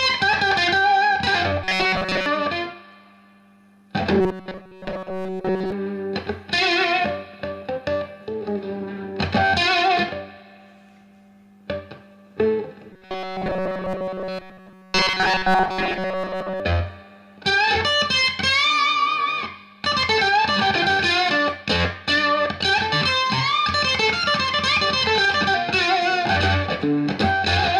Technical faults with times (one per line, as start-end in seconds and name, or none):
1.64-2.26 robotic sound from repeated short buffers
4.21-5.72 robotic sound from repeated short buffers
12.93-16.60 robotic sound from repeated short buffers